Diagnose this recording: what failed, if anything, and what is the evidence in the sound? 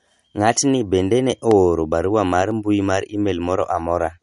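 Codec stage: across the whole speech clip the sound is plainly watery and swirly, with s sounds that chirp and go metallic and consonant onsets that smear. This is likely MP3 compression at a low bitrate, around 48 kbps. Short of bits, the encoder drops weak frequency lines, which flicker on and off between frames. A spectrogram would show a hard ceiling on the treble and patchy, blinking holes in the upper bands from frame to frame.

Driver or buffer stage: periodic USB or driver dropouts produce evenly spaced ticks, one each second, from 1.51 s to 3.51 s, so about three of them. Each time, the audio path lost roughly a millisecond of signal and filled the gap with silence, most plausibly because a background task stalled the bus or driver on a fixed cycle. On the waveform these show up as tiny, regularly spaced gaps at signal level. On a spectrogram each is a thin vertical broadband stripe.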